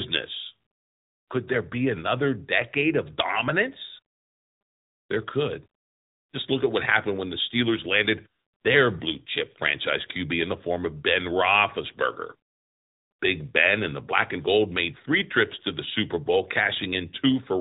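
Speech passed throughout through the AMR narrowband mobile codec: nothing above 3.8 kHz survives, and the plainly audible buzzy, synthetic coloration fits a 10.2 kbps mode.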